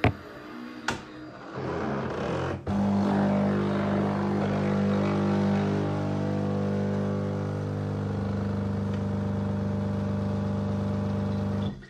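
No technical faults are audible.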